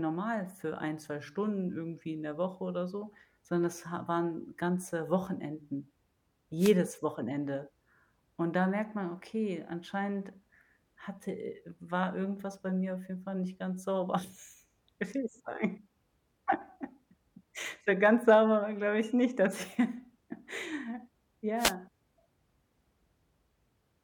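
At 6.58 to 6.74 s and again at 21.57 to 21.74 s, the speech is hit by a wireless microphone noise hit: the FM radio link fades as reflected paths cancel, and receiver noise rises into a brief burst of hissy static lasting under 0.2 s each time.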